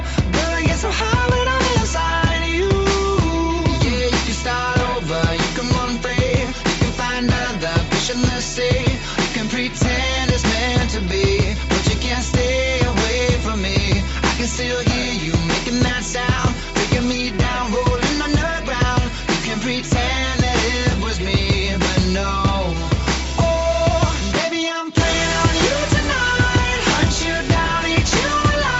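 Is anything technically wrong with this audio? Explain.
No, nothing stood out as technically wrong on listening to this audio.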